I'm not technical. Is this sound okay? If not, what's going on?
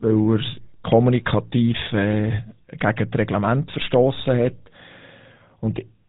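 No, not quite. All the way through, this speech has gone through the GSM full-rate codec, the squeeze that early mobile phones used to shrink voices down. It rebuilds the voice from a rough model of the mouth and throat, fed by a coarse train of pulses, so you get that buzzy, gravelly edge on everything. It also throws away everything above 4 kHz, which is why the voice sounds dull and boxed-in, like an old phone call.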